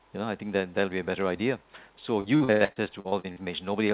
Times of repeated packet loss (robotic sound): 2.20-3.39

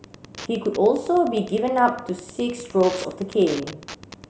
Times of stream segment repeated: none

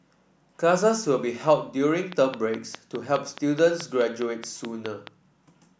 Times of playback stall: none

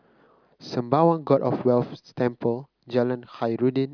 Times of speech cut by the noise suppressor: none

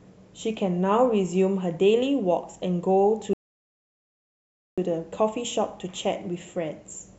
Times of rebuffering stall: 3.33-4.78

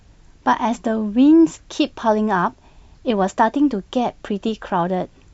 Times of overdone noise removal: none

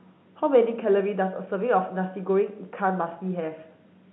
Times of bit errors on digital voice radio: none

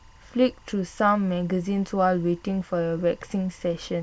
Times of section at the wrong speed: none

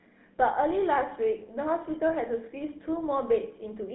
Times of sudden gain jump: none

